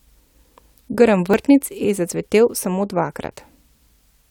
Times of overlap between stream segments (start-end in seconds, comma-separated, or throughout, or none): 1.34, 3.32